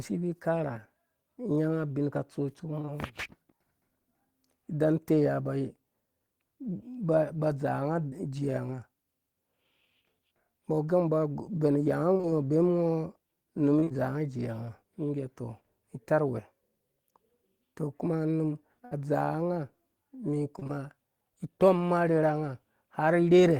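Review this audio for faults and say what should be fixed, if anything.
Short concealed packet loss occurs at 2.81 to 2.89 s (two consecutive 20 ms losses) and 8.09 to 8.14 s. The decoder extended the preceding sound across each 20 ms hole and blended back, leaving a brief smear. Unlike the bursts, there is no fading hold.

Repeated packet loss (robotic sound) occurs at 12.14 to 12.25 s, 13.79 to 13.95 s and 20.59 to 20.71 s. Each stretch has three gaps of up to 26 ms, and about half of each stretch is patched. The quick succession of patches gives a choppy texture with pieces missing. A single smear would be heard as one brief glitch instead.

A burst of packet loss occurs at 18.85 to 18.93 s. About 60 ms went missing in one block, so the concealment held and faded the last sound before resuming further on. This is one continuous hold, not a chain of separate patches.

Fix: stabilise the network path and enlarge the adaptive jitter buffer, or add forward error correction, so that late or lost packets arrive in time to play.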